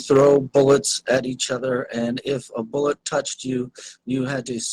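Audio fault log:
Throughout: overlap-add ripple. The level pumps by about 6 dB around a hundred times a second, a buzzy, robotic flutter from frame overlaps that don't sum evenly.
0.11–0.76 s and 1.13–1.15 s: microphone overload. Peaks run about 5 dB and 3 dB past the converter's limit and get flattened, giving a harsh crackle, likely from input gain set too high.
0.17 s, 1.17 s and 3.21 s: microphone volume stepped down. Voice and background drop suddenly by about 3 dB, 6 dB and 3 dB, likely the call software cutting input gain.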